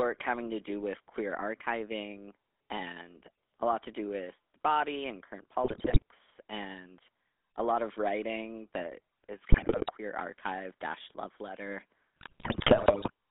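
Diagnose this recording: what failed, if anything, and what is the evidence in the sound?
Throughout, the speech has a buzzy, gravelly roughness, with plainly audible codec damage and a narrow line band from about 250 Hz to 3.6 kHz. The stage is the codec: this is the GSM full-rate codec. It models the vocal tract as a filter and excites it with a coarse train of regularly spaced pulses, so fine detail in the voice is replaced by that grainy buzz. The sound fits its 13 kbps rate.

Three bursts of squawking, popping and gargling break through: after "the body and current" from 5.64 to 6.02 s, ending before "and a lot of"; after "of writing that is" from 9.5 to 9.91 s, before "archive dash love letter"; and after "archive dash love letter" from 12.16 to 13.10 s. These are GSM bit errors on the radio link. Corrupted filter, pitch and gain values distort the spectrum or spike the level frame by frame.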